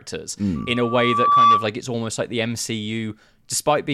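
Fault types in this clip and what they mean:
loudspeaker feedback squeal: a 1.2 kHz tone swells over about a second, ending before "it's almost like the"; the microphone re-amplifies its loudspeaker until that frequency runs away.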